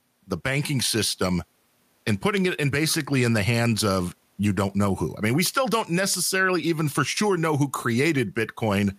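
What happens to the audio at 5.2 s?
Nothing goes wrong at 5.2 s; the speech carries on cleanly through that moment with no audible fault.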